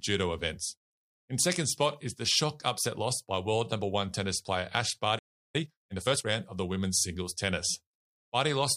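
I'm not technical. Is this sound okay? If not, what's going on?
No. At 5.18 s the speech cuts out and goes silent for about a third of a second, resuming at 5.56 s. This is a playback stall: the player most likely ran short of incoming audio and had nothing to play until more arrived.

From 5.56 to 6.26 s the speech then sounds rushed, about 1.5 times normal speed, yet at its usual pitch, just before "round of the women's". This is time-compressed catch-up: the player trims tiny slices to recover lost time.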